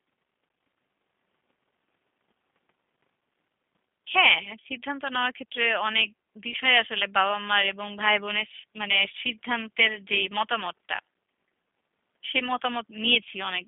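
From start to finish the speech is squeezed through G.729 coding at 8 kbit/s, rebuilt from a pitch predictor plus a few pulses per frame, leaving it rough, synthetic, and cut off above 3.6 kHz.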